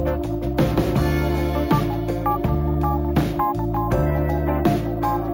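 The audio was raised from 16 kHz to 48 kHz by simply repeating each sample with no smoothing filter, causing imaging from sample-and-hold upsampling throughout. A mirrored copy fills 8 to 16 kHz at about 26 dB below the signal, heard as a metallic fizz tracking the level and moving against the pitch.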